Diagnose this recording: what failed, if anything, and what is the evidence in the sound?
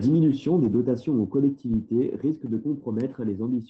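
Network stage, with the codec covering for it: there's a lost packet rebuilt from error correction between 0.63 and 0.65 s, just before "dotations aux". It's a 20 ms stretch that turns rougher and noisier, with no dropout or click. That fits a single lost Opus packet. The next packet carried a low-bitrate copy of it as in-band FEC, so the decoder played that cruder copy instead of leaving a gap.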